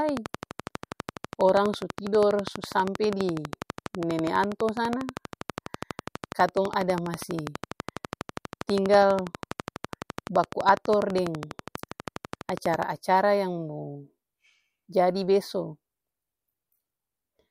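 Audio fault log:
0.09–12.84 s, train of clicks: A regular ticking runs at about 12.2 clicks per second, roughly 150 in all. The clicks share one shape and peak about 15 dB above the speech. They tick through pauses too. Interference from nearby equipment is the likely cause.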